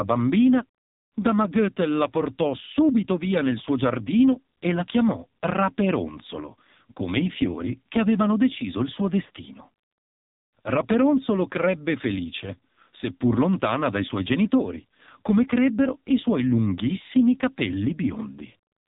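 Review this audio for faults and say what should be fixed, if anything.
The whole clip sounds like AMR narrowband mobile codec damage, heavily so: the speech is buzzy and synthetic with nothing above 3.8 kHz, which fits a low bitrate around 5.9 kbps. Capture or route it over a wideband path next time instead of a narrowband phone link.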